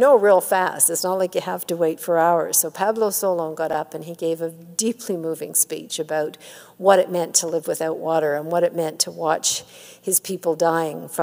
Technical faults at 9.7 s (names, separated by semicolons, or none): none